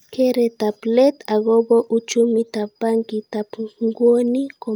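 No technical faults are audible.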